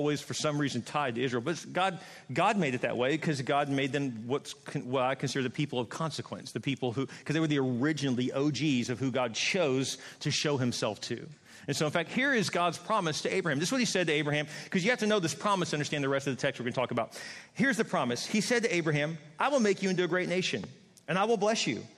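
At 20.64 to 20.66 s a single loud pop cuts in. It peaks a few decibels above the surrounding sound, which carries on underneath. The likely cause is a sudden voltage pulse, from a plug, switch or static, shaped into a brief sharp thump.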